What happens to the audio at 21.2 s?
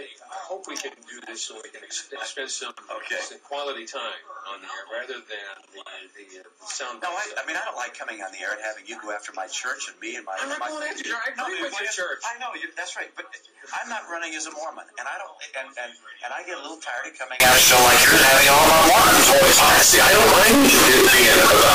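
At 21.2 s the audio is a float read as integer, from 17.4 s to the end. It turns harsh, loud and near-square. Likely, 32-bit float samples were read as 32-bit integers.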